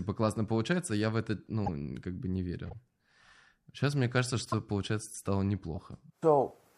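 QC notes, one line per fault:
1.65–1.69 s, 2.67–2.73 s, 4.45–4.54 s and 5.76–5.78 s, corrupt frame decoded: four short chirpy blips cut into the speech, each lasting somewhere from 22 to 88 ms, which fits one or two damaged codec frames at a time. The decoder played flipped bits as if they were valid, so wrong gains and misread codes threw energy into the wrong frequencies. The ones at 1.65 s and 4.45 s poke out fairly loud; the other two are quieter squeaks.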